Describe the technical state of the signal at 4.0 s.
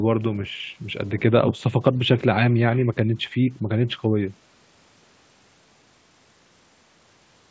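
At 4.0 s the speech is intact, with no dropout, glitch or distortion, only the normal call-path band limit with nothing above about 8 kHz.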